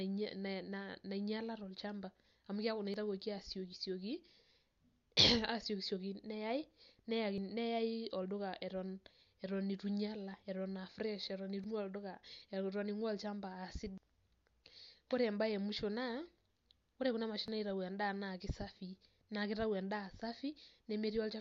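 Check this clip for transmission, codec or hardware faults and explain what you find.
Four small skips in the speech are likely dropped buffers (overrun), at 2.94 s (right after "tol'chamba amu keeku naa"), 7.38 s, 11.64 s and 17.48 s. Each is a jump where samples went uncollected and were overwritten, roughly 20 ms lost, about 40 ms at 11.64 s. The sound jumps ahead without any silent gap, unlike a dropout.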